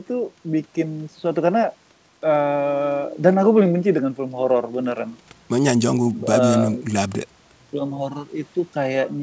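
There are no technical faults to describe in time order; the speech simply carries the normal band limit of a wideband call path, with nothing above 8 kHz.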